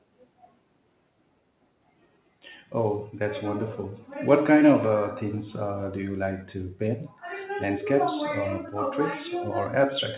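No technical faults are audible.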